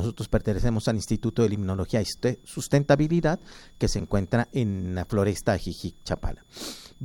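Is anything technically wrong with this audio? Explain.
Yes. A switching supply whistle runs throughout: a faint high tone, roughly 40 dB down, drifting between 3.43 and 3.48 kHz as a power supply's burst mode shifts with load. On a spectrogram it shows as a thin, slightly wavering horizontal line.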